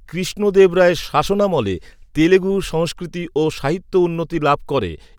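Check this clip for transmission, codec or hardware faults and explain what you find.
Nothing stood out on listening to this speech recording.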